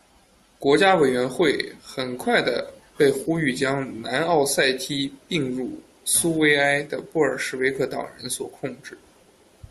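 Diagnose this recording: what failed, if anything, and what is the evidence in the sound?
Nothing failed here: the speech comes through steady and intact, with no dropouts, glitches or damage at any stage of the chain.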